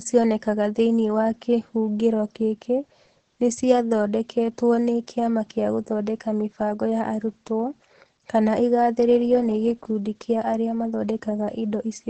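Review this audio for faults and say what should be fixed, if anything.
The whole clip has Opus voice compression damage: nothing above 8.4 kHz, and the speech sounds muffled, hoarse and a bit robotic, which points to SILK wideband at roughly 10 kbps. To avoid it, record or export from the original source, or give Opus a much higher bitrate.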